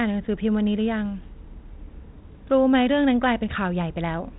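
No technical faults can be heard in the speech. It has passed through G.726 ADPCM at 32 kbit/s, which leaves only light coding roughness and nothing above 3.9 kHz.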